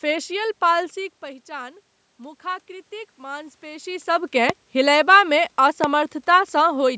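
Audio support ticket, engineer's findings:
Automatic gain rising, 0.95 to 4.14 s: input level drops about 14 dB as the talker moves back; AGC slowly adds about 5 dB, room noise swelling with it.

Loud pop, 4.50 to 4.52 s and 5.84 to 5.86 s: single sharp pops about 15 dB above the signal, likely a connector, switch or driver voltage glitch.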